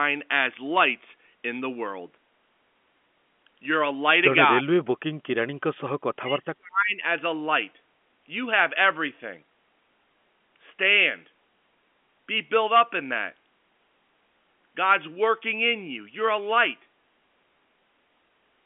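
At 4.6 to 4.67 s the speech suddenly dips by something like 25 dB, then at 6.15 to 7.02 s it's pushed down much deeper, around 35 dB, for the better part of a second. That's speech suppressed in double talk, most likely an echo canceller hearing far-end audio on the loudspeaker while this side talked and ducking everything together. Through the telephone band of roughly 200 Hz to 3.4 kHz, the suppressed stretches come across as dips in the voice.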